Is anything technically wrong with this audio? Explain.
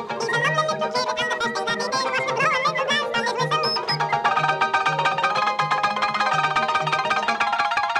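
Yes. Throughout, the audio has been read two samples at a time (double speed): pairs of samples were treated as a single frame, as if the data held two channels or wider samples. Playback runs at twice the speed and a full octave high, 12 semitones.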